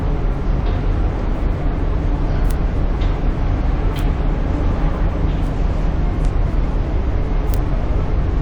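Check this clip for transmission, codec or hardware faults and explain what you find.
Two kinds of fault are present: isolated bit error spikes and two places where compressed frames were skipped.

Bit error spikes occur at 2.51, 3.99, 5.47, 6.25 and 7.54 s. A single flipped bit throws one sample, or three in a row at 6.25 s, far off by a power of two before it snaps back. Each is heard as a bright, broadband tick unrelated to the surrounding audio.

Compressed frames skipped occurs at 5.84 to 5.86 s and again at 7.94 to 7.96 s. Around four 42.7 ms frames, roughly 150 ms of audio, were never decoded, so the sound jumps ahead.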